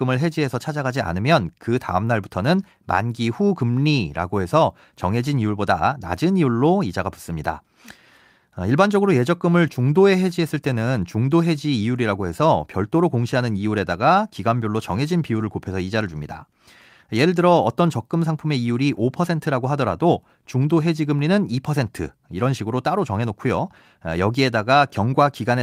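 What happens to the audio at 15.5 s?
Nothing goes wrong at 15.5 s; the speech there plays through cleanly, with no dropout, glitch or other audible fault.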